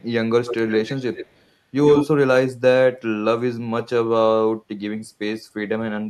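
From 0.45 to 1.36 s and 1.86 to 2.07 s, an echo leak repeats the speech 108 ms late, likely from an incomplete echo canceller. It is a distinct copy, not reverb's smeared tail.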